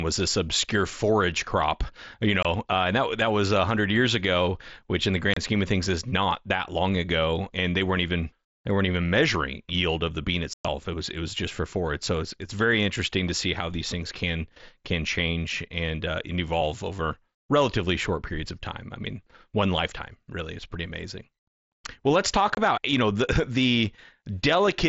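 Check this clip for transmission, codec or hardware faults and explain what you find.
The speech has unconcealed Bluetooth headset packet loss at four points: 2.43–2.45 s, 5.34–5.37 s between "ago which in the" and "scheme of things is", 10.53–10.65 s after "yield of the bean", and 22.55–22.57 s between "let's talk" and "about you know the". Voice packets between headset and phone were dropped, and nothing was filled in to replace them. The speech simply stops for about 22 to 30 ms, or about 113 ms at 10.53 s. Each hole has abrupt edges, and the gaps sit on the wideband mSBC headset link heard throughout.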